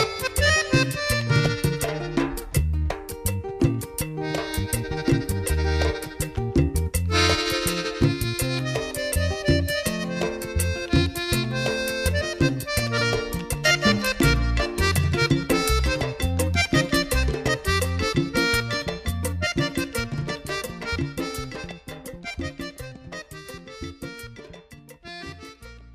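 No technical faults can be heard anywhere in the recording; the signal holds steady throughout, with no breaks, distortion or disturbances.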